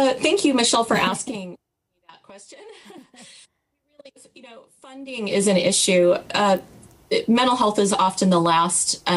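From 4.92 to 5.41 s, the gain changes about 25 dB in unsmoothed 1 dB steps, roughly a hundred a second: zipper noise, heard as a rapid ticking.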